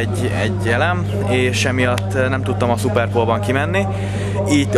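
From the first moment to the end, a steady mains hum sits under the audio, its tone fixed at 50 Hz and roughly as loud as the wanted sound itself. Power-line current has leaked into the signal path, most plausibly through a ground loop or a transformer near the cabling. What separates it from rumble or handling noise is its constancy: a single unwavering pitch locked to the supply frequency, never drifting or thumping.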